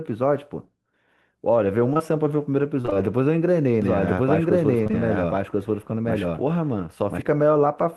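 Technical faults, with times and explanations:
1.93 to 2.01 s, short concealed packet loss: two back-to-back 20 ms holes filled by extending the preceding sound, giving one brief smear rather than a choppy run.
2.81 to 2.97 s, repeated packet loss (robotic sound): four gaps in quick succession, about half the span patched, so the sound turns choppy instead of briefly smeared.
3.82 to 7.22 s, doubled audio track: an equally loud, full-band copy runs roughly a second behind, dry and without room colour, cutting in and out abruptly; likely a second capture path or misaligned edit.
4.83 to 4.95 s, short concealed packet loss: three consecutive 20 ms holes bridged by continuing the last sound, a short wobble, distinct from the longer robotic stretch earlier.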